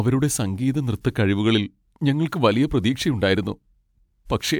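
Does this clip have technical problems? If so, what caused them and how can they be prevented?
No, nothing stood out as a technical problem when listening to this speech clip, so there is nothing here that needs preventing.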